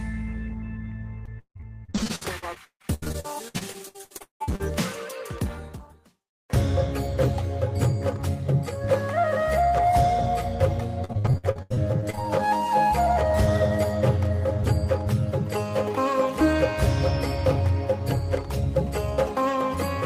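From 1.25 to 4.61 s and again from 11.05 to 12.19 s, repeated packet loss (robotic sound) leaves rapid holes patched by stretching prior sound, so the choppy texture differs from a single clean dropout.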